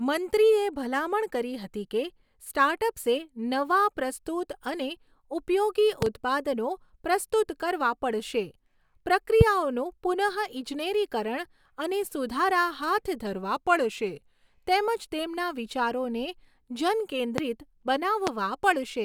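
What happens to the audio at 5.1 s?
Nothing goes wrong at 5.1 s; the speech runs through that point intact, with no dropout, click, distortion or other fault.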